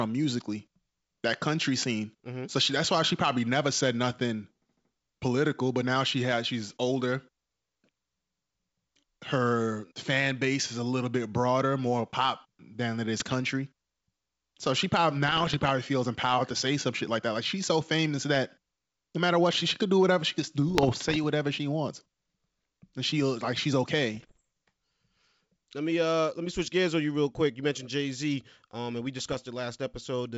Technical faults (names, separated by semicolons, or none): bit errors on an ADPCM link